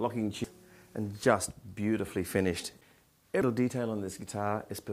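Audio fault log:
0.44 s and 3.42 s, damaged data in a compressed stream: each point carries a chirp, squawk, click or short hole that cuts across the sound and is gone almost at once. Part of the compressed stream is wrong there, with bytes lost, zeroed or overwritten. The decoder either misreads those frames, producing the garbled burst, or drops them, then loses sync and hunts for the next valid frame header before playback resumes.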